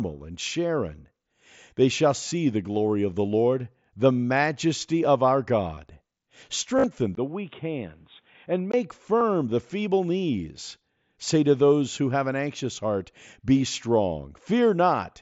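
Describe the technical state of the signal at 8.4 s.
At 8.4 s the sound is dull and boxy, with nothing above 3.8 kHz, a slightly lower level and a faint new noise floor, after a brief gap at 7.15 s. This is likely an input switched to a poorer device, which persists from 7.15 to 8.74 s.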